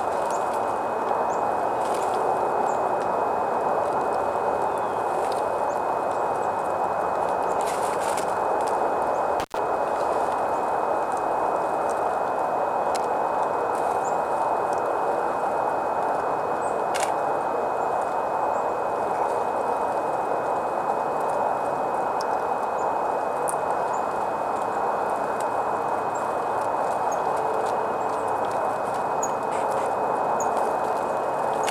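At 9.40 s the sound drops out because of an intermittent contact, and it returns by 9.59 s. A loose cable or plug briefly lost its connection. The signal path stayed open for about 99 ms. Crackle marks the moment the contact breaks and again when it closes. In between, the audio is gone, and only faint hiss remains. The gap is short.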